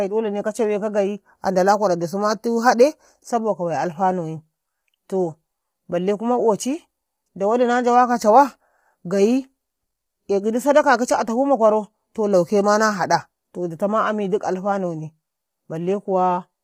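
Speech, and across all of it the voice sounds rough and grainy, with noise filling between harmonics and a thin, synthetic top: likely heavy low-delay AAC compression, fitting roughly 24 kbps.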